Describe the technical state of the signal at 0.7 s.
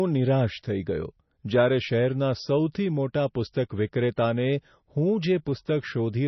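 At 0.7 s the speech carries MP3 compression damage, present throughout, with nothing above 5.9 kHz and a watery, swirling sound. It is likely from a very low bitrate, with flickering weak bands on the spectrogram.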